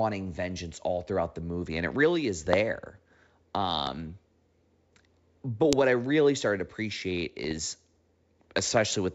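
At 2.53 s, just after "and it really is", a loud pop cuts through the speech, and identical ones follow at 3.87 s and 5.73 s, the last just before "I really started to". Each is a single sharp crack lasting about 20 milliseconds and peaking roughly 20 dB above the speech, which runs on underneath unaltered. That pattern likely comes from a voltage step such as a switch, static discharge or plug contact. What sets these apart from data damage is that each is a single added pulse sitting on top of the speech.

From 7.44 to 7.61 s, right after "really started to appreciate", the fault changes to bit errors on an ADPCM link, here the G.722 wideband path, whose light upper-band hiss is audible. A small fraction of a percent of bits flipped, and eight frames were damaged. Each error knocks the decoder's step size and prediction off track, so instead of one clean click there is a gritty, crackling stretch of roughly 170 ms with brief jumps and dips in level as the decoder recovers.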